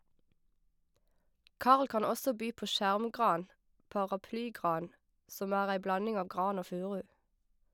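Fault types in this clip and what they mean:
No technical faults can be heard in this speech recording. Nothing in the audio points to a problem with how it was captured, processed or delivered.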